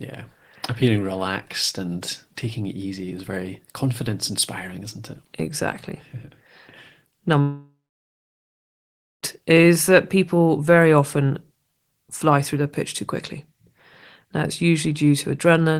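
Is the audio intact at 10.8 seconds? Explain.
Yes, the audio at 10.8 seconds is intact, with no fault at that moment.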